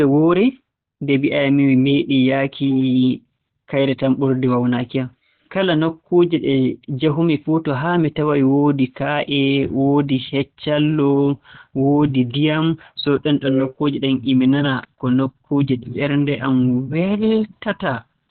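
It's a speech clip, and the whole thing comes across muffled and hoarse, with nothing above 4.3 kHz, so it's narrowband from start to finish. That's likely Opus compression squeezed hard into its SILK speech mode, which fits a bitrate around 12 kbps.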